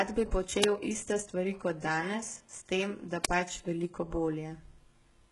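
Speech, with heavy codec damage throughout and nothing above 11.4 kHz, likely from HE-AAC compression at a very low bitrate around 12 kbps: the treble is rebuilt by spectral band replication from copied lower bands, so its harmonics don't line up and sibilants turn gritty or metallic. There are also two uninitialised buffer faults, cracks at 0.64 s just before "iste stvari" and at 3.25 s between "tem da" and "pač veliko". Each lasts 5 ms, which fits a short block that played leftover memory as samples before any audio was written to it.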